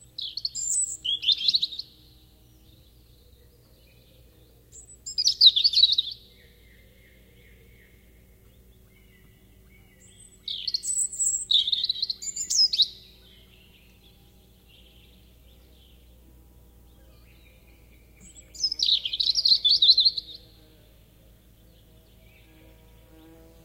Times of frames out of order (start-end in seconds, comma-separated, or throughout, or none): none